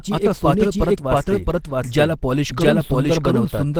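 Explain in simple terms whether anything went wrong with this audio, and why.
Two things went wrong, and both last the whole clip.

First, a doubled audio track: the sound was most likely picked up twice, once by a slower route, so a second full copy is mixed in about 0.7 seconds behind the first. That copy is roughly as loud as the original and has no fading tail, so it doesn't sound like a room echo. Instead, every stretch of speech is overlapped by itself, making it cluttered.

Second, Opus compression: the audio was likely squeezed down hard with the Opus codec, and at such a tight budget it switches to a mode built for speech. That mode throws away a lot of fine detail and fills gaps with rough approximations. The result is clearly audible: the speech sounds muffled and hoarse, with a grainy, noisy texture instead of clean, smooth sound.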